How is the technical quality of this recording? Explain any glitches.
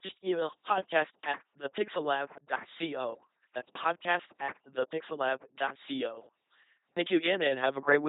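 Poor: the speech has passed through an LPC-10 vocoder for its whole length. This coder discards the real voice and rebuilds it by exciting a ten-pole vocal-tract filter with either a pulse train or noise, switching hard between the two. The result is a heavily damaged, buzzing robotic voice with nothing above 3.8 kHz, consistent with a 2.4 kbit/s link.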